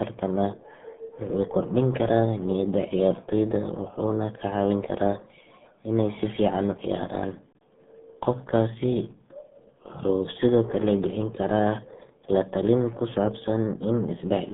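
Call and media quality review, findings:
RealAudio 14.4 codec, throughout. Speech muffled and gargly, band roughly 150 Hz to 3.6 kHz, nothing above 3.8 kHz. Heavy damage fits an 8 kbit/s low-rate speech coder.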